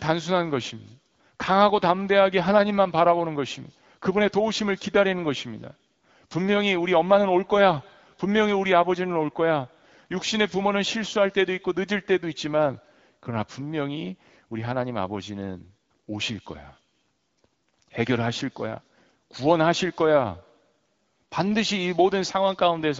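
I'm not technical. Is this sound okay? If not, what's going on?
Yes, nothing is wrong with this speech recording.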